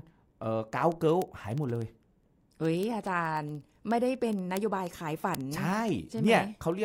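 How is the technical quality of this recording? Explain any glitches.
The recording is marred throughout by word clock ticks, audible from 0.14 s to 6.84 s. The receiving device is running on its own clock instead of locking to the sender's, with the two drifting apart by something like 400 ppm. Each time they slip past one another, a single sample is dropped or repeated and its neighbours are misread. Around a hundred sharp ticks of uneven strength result, landing steadily about every 70 ms beneath the speech.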